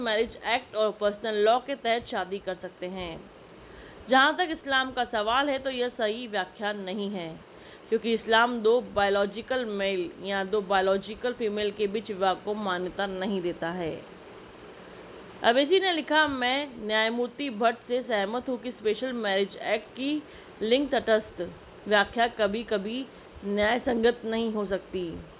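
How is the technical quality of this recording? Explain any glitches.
Nothing in the recording stood out as a technical problem on listening, so there are no glitches to explain.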